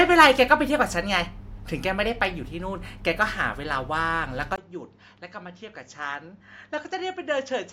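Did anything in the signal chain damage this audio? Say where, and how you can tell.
Yes. At 4.56 s, after a 20 ms gap, the level drops about 10 dB and nothing above 7.3 kHz remains, likely from the input being switched to a poorer device at the driver stage.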